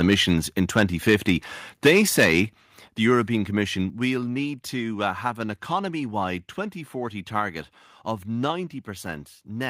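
The speech opens with microphone overload from 0.03 to 0.21 s, then again from 0.76 to 1.31 s and from 1.85 to 2.4 s. The loudest syllables carry a crackling, squared-off edge, most likely because the input gain drove peaks past the converter's limit so their tops were cut flat. The overshoot is about 5 dB, then about 6 dB, then about 9 dB in the third burst, with a few percent of samples clipped in each.

The microphone volume is stepped down three times: at 1.88 s by about 2 dB, at 2.88 s by about 5 dB, and at 3.9 s by about 4 dB, just before "will need to uh". At each point voice and background drop together in a single abrupt step. The likely cause is the call software reacting to the overloaded input by lowering the device gain, about 11 dB in total across the three steps.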